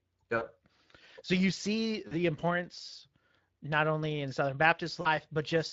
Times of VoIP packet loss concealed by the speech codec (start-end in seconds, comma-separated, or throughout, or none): 0.37-0.44, 2.07-2.14, 5.01-5.17